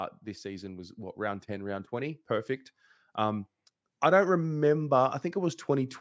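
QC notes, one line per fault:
0.42–2.58 s and 3.17–5.96 s: automatic gain rising. The gain control judged the input too quiet and lifted its gain slowly. Speech and background swell together, by about 4 dB in the first span and about 5 dB in the second.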